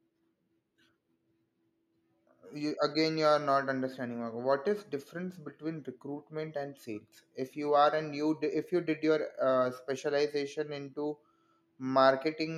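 No audible faults detected.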